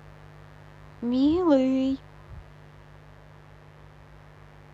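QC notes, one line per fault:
throughout: mains buzz, a steady raspy buzz under the speech, sitting roughly 30 dB below it. Sharp switching spikes at twice the 50 Hz mains rate produce a dense ladder of harmonics of 50 Hz reaching up into the kilohertz range, giving the rasp rather than a smooth hum.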